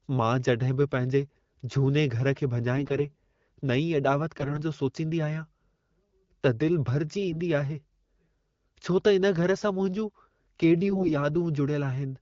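AMR bit errors at 2.76–3.02 s (just after "पंहिंजे झूने घर खे"), 4.37–4.60, 7.31–7.38 and 10.88–11.13 s: weakly protected bits flip, so pulses and fine pitch, gain and spectrum values land wrong. The speech keeps pitch and level but turns hoarse, scratchy and gargly, harshest around 4.4 s.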